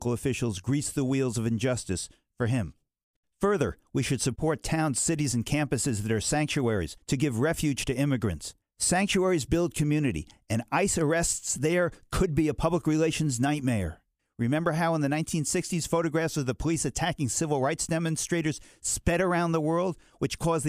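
No technical faults can be heard anywhere in the recording. Nothing in the audio points to a problem in how it was captured or delivered.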